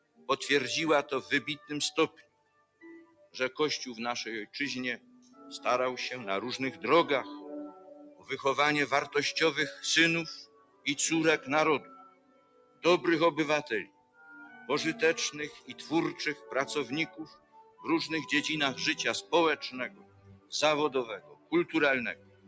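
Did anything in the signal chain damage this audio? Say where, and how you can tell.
Yes. At the call-processing stage, a speech-tuned noise suppressor was left on for this non-speech audio throughout. Held sound and tails pump by about 15 dB while onsets mostly pass. A plain compressor would react to level rather than to steadiness.

The noise suppressor cut sound, dropping level by about 16 to 19 dB, at 0.0–0.29, 1.62–3.35, 4.46–5.41, 7.71–12.85, 13.85–17.86 and 19.22–22.48 s. The suppressor mistakes the sustained parts for noise, so decays sink early. Dropouts would instead be silent gaps, even through attacks.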